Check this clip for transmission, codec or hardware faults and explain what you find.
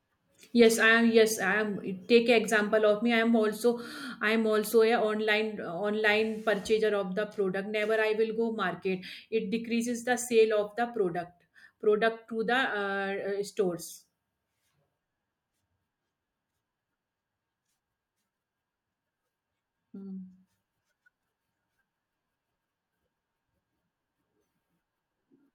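No faults turn up anywhere in this clip.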